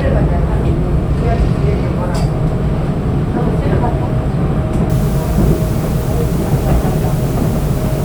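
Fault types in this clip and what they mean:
Low bit depth with dither: from 4.90 s to the end, the sound is held to about 6 bits, with dither randomising the rounding so the error becomes a constant, even hiss roughly 20 dB below the sound rather than the gritty, signal-following distortion of undithered truncation.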